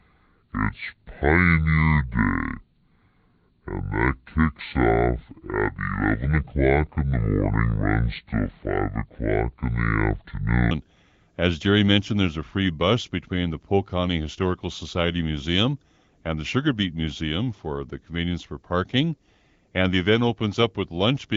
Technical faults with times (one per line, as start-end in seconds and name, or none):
0.00-10.71 section at the wrong speed